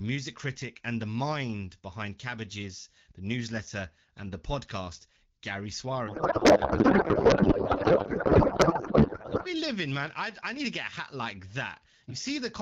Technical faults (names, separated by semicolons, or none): codec payload misread